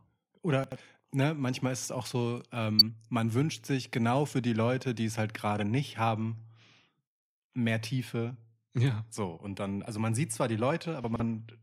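A jumbled stutter at 0.64 to 0.76 s is chunks out of order: a 40 ms chunk played two chunks late, leaving hard joins. At 1.21 s, just before "manchmal ist es auch", a quiet blip marks a corrupt frame decoded: damaged compressed data, fitting about two frames, put energy at wrong frequencies. A much louder burst of the same corrupt-frame fault follows at 2.79 to 2.82 s, between "ist es auch so" and "man wünscht sich genau". After "man sieht zwar die", 11.04 to 11.2 s garbles again, with a 40 ms chunk arriving three chunks late.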